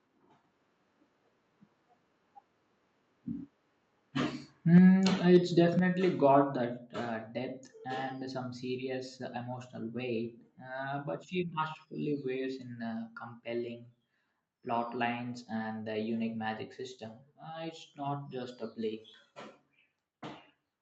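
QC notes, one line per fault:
4.74–4.78 s and 5.35–5.37 s, microphone overload: two brief harsh, crackly spikes on the loudest moments. The peaks run about 3 dB and then about 1 dB past full scale, flattening roughly a tenth and then a twentieth of the samples. Input gain set too high at the mic is the likely cause.
4.78 s and 5.79 s, microphone volume stepped down: the whole level, background included, drops abruptly by about 4 dB and then about 5 dB. The first drop comes right after the clipped peak, so the call software most likely reacted to the overload by pulling the device's input gain down in one step.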